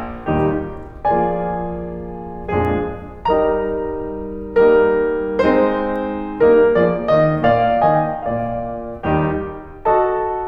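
At 2.65 s and again at 5.96 s the music carries a bit error spike, heard each time as one sharp, bright tick with no connection to what is playing. A single flipped bit throws one sample far off its true value before the next sample returns to normal, so the energy lands across the whole spectrum at once. The first peaks near about -19 dBFS, the second quieter at about -25 dBFS.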